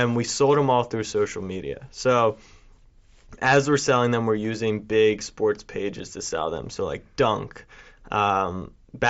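Two tiny blips are smoothed over: at 1.54 s, just after "them all through social", and at 5.99 s, between "using big sports" and "to sell them". These are concealed Bluetooth headset packet loss, where about 15 ms and 7.5 ms of lost audio were filled with repeated recent waveform.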